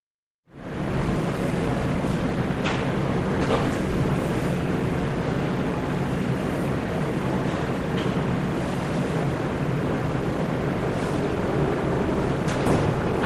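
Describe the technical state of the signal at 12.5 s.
At 12.5 s the sound is intact, with no audible technical fault at that moment.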